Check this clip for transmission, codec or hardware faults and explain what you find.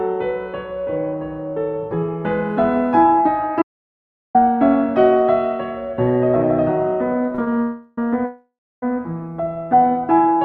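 Yes, the clip has three kinds of fault, all clustered in the second half apart from one early gap. The music reaches the listener through a call codec whose coding noise and top end cut off near 12 kHz point to Opus at a modest rate, around 32 kbps.

The first fault is an audio dropout to silence from 3.62 to 4.35 s. Most likely the input was briefly lost, through a disconnected source, a failed link or an accidental mute, while the recorder kept writing silence. The music stops dead in mid-flow for about 0.72 s. The gap is silent with no background left in it, and whatever played during that stretch is simply gone when the sound resumes.

Between 7.24 and 7.48 s there are repeated stalls (stutter). Packets arrived late or too slowly, so the jitter buffer ran dry five times in quick succession, and the receiver stretched the last fragment of music to cover each wait. The longest wait was 32 ms, and together the waits make up about 35% of that span. 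Nothing is lost, but the music drags and judders unevenly.

Two call audio freezes follow, at 7.62 to 7.98 s and 8.25 to 8.83 s. In each case packets were likely held up in transit and the buffer emptied, so the receiver continued the last sound while it waited. The first hold lasts 0.36 s and is bridged entirely by a fading continuation. The second lasts 0.57 s, and its concealment decays into about 0.3 s of silence. Each time the music picks up exactly where it stopped, pushed later in time rather than cut.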